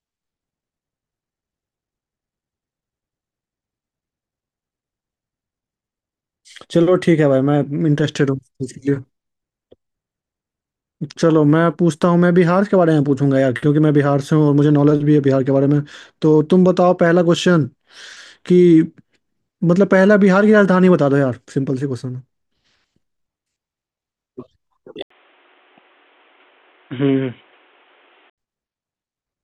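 Speech, with the input likely switched to a poorer device from 25.02 to 28.38 s: after an 80 ms gap, the band stops near 3.8 kHz, turning boxy, with a small level shift and faint new background noise.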